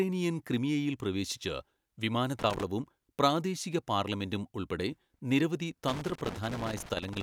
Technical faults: loose connector crackle

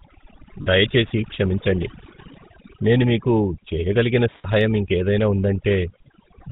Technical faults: overdone noise removal; sample clock jitter; GSM full-rate codec; lost GSM frames

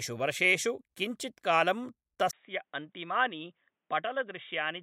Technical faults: input switched to a poorer device

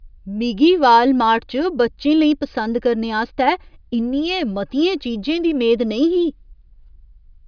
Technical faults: none

